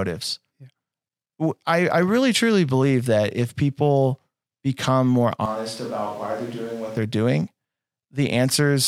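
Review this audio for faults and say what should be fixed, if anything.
From 5.46 to 6.97 s, after "if people become more", the speech suddenly turns roomy and hollow, loses bass, drops about 10 dB and gets noisier, then snaps back before "they're doing". That's likely a switch to a distant microphone. Monitor the close mic's feed and check its cable and battery.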